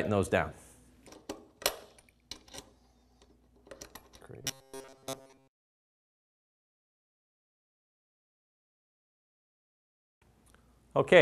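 From 4.41 to 6.54 s the sound turns into robotic sound from repeated short buffers, a rigid metallic buzz near 134 Hz. This is likely audio arriving too slowly, so a roughly 7.5 ms fragment is replayed for most of that span while real audio is skipped.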